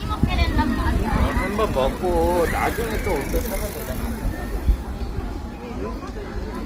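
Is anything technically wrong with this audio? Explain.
Yes. Throughout, the sound was likely transcoded between lossy codecs, an HE-AAC-like stage then Opus, stacking both artefact sets, with nothing above 15.8 kHz.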